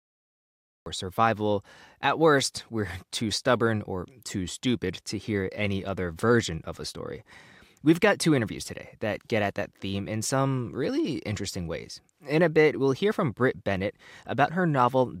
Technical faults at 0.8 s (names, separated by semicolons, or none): cut-off start